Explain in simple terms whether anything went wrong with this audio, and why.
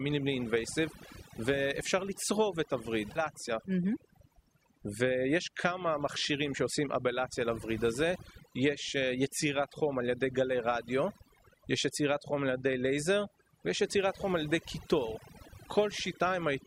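A noise reduction tool was set too strong throughout this speech clip, a fault called overdone noise removal. Any part of the sound close to the background hiss gets shut off, so quiet bits of the voice vanish too. The background drops and breaks up into twinkling specks.

Between about 3.15 and 3.20 seconds, the sound suddenly jumps ahead with a small blip. This is likely a stream segment skipped: one piece of the stream failed to arrive, and the player carried straight on with the next piece.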